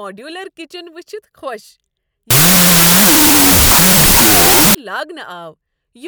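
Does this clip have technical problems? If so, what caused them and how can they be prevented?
Yes. From 2.31 to 4.75 s there is a wrong sample width fault: the audio was decoded with a different byte count per sample than it was stored with, which fits 32-bit float data read as 16-bit integers. Each float is split into two integer values, mostly built from mismatched bytes, so the segment plays at half speed, an octave low, with the speech buried under loud noise. To prevent it, declare the sample format explicitly and check it against the file header before decoding.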